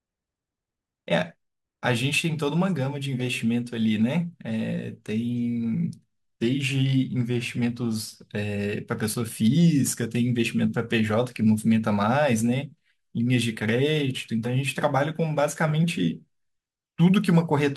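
Throughout the speech, sample clock jitter adds a fine hiss and roughness that tracks the signal: it swells on loud passages and on sibilants and other high-frequency energy, and disappears in the pauses. The converter's clock wanders by a few microseconds, so each sample is captured at a slightly wrong instant. Steep parts of the waveform turn that timing error into amplitude error, here roughly 35 dB below the signal.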